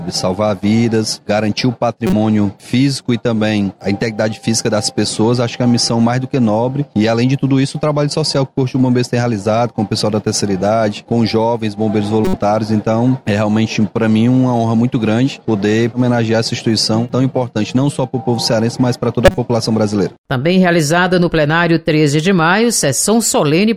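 Short, loud bursts of garbled noise cut in at 2.07 to 2.13 s, 12.25 to 12.36 s and 19.25 to 19.38 s. Each is a corrupt frame decoded: flipped bits in a few compressed frames were played anyway, throwing energy onto the wrong frequencies.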